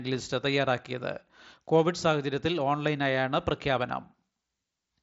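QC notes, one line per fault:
Nothing stood out on listening to this speech.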